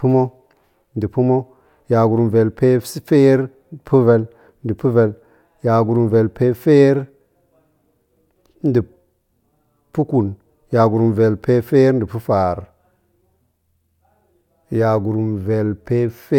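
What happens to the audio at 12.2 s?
Nothing goes wrong at 12.2 s: the speech carries on intact through that moment, with no dropout, click or distortion.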